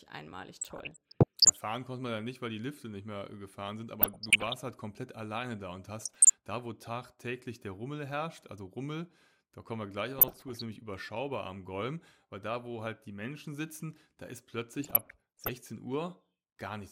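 A speech clip with DAB burbling at 0.61–1.59 s (ending just before "konnte man ja nicht"), 4.01–4.57 s, 5.99–6.30 s, 10.19–10.62 s and 14.79–15.49 s: weak-reception bit errors at under one percent corrupt MP2 samples and scale factors, giving short noise blips and sub-band level jumps over continuous audio rather than the silent gaps of dropouts.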